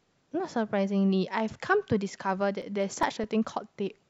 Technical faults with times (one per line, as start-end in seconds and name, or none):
2.62-3.65 CD scratch ticks